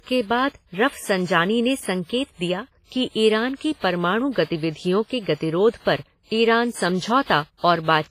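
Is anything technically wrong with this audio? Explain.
Yes. Throughout the speech there's heavy, likely WMA compression: long transform blocks smear quantisation noise, giving a ringing, washy sound with breathing hiss.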